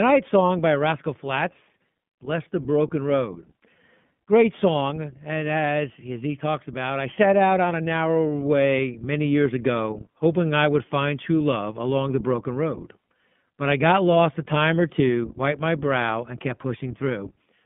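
All the way through, the speech carries iLBC codec damage: a 3.4 kHz ceiling, plainly rough, synthetic texture, with the 20 ms frame structure pointing to its 15.2 kbps mode.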